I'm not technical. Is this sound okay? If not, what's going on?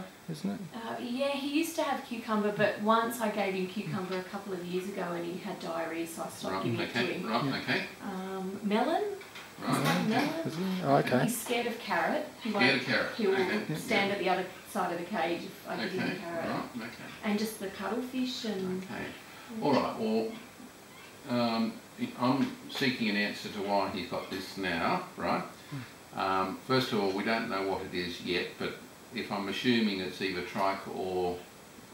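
Yes, nothing stood out as a problem on listening.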